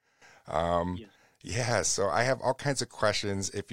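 A speech clip with nothing technically wrong with it.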